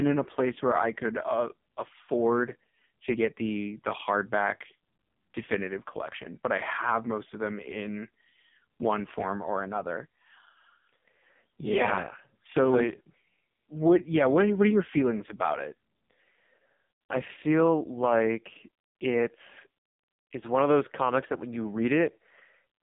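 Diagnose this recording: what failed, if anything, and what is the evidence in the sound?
The codec stage is the culprit: this is the AMR narrowband mobile codec, and it's on the whole clip. Nothing gets through above about 3.7 kHz, and the band sits roughly between 150 Hz and 3.6 kHz, so the speech has that boxed-in phone sound. The damage is heavy, with a buzzy, synthetic edge from start to finish, which fits one of AMR-NB's lowest bitrate modes, around 5 kbps. At that rate the vocal-tract model gets too few pulses to rebuild the voice cleanly.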